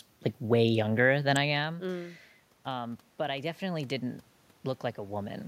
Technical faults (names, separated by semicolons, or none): electrical switching spike; automatic gain rising